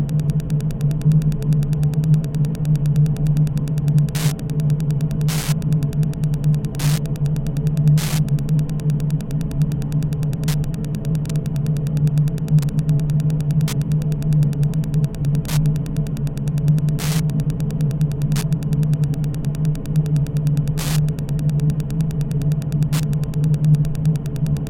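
From start to finish, Wi-Fi interference sits under the audio: a steady ticking about ten times a second, matching a 102.4 ms beacon period. A nearby radio's transmissions are being rectified by the audio circuit, producing clicks roughly 20 dB below the wanted sound.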